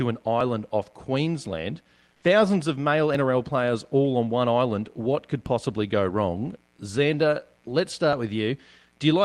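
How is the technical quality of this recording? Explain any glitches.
The speech comes through a call codec, with the top end stopping near 12 kHz as Opus does in wideband-plus modes. There are two kinds of glitch: four brief skips and one short patch of substituted background.

Dropped buffer (overrun) at 0.41, 3.15, 5.46 and 8.13 s. The one at 3.15 s falls between "of male" and "players all on one", and the one at 5.46 s comes just before "go wrong". Each is a skip where the audio jumps ahead by about 10 ms, likely because the capture side failed to read a buffer before the hardware overwrote it. What separates this from a network dropout is that no gap or silence is heard. The two sides butt together, so the jump is the seam itself.

Comfort noise in place of the background from 2.14 to 2.22 s, lasting 80 ms. In this pause the real room tone, sitting about 46 dB below the loudest speech, is briefly swapped for a smooth, featureless hiss only about 1 dB different in level. 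The likely cause is Opus discontinuous transmission, which stops sending during non-speech and lets the receiver synthesize noise instead. Unlike a noise gate, it never drops to silence. The texture just flattens.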